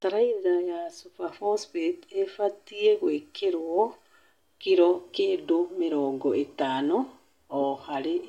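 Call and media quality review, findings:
Call and media quality review findings: no faults found in this speech clip.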